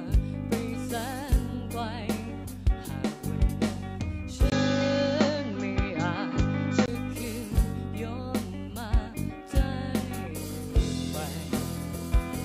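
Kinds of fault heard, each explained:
Input switched to a poorer device: from 4.50 to 6.88 s nothing above 7.3 kHz remains and a new noise floor appears about 30 dB down at an unchanged level, likely a narrower-band microphone taking over. A spectrogram shows a flat ceiling, and the waveform a 20 ms gap at the switch.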